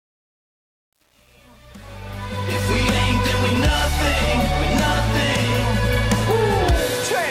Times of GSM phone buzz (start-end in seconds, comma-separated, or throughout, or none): none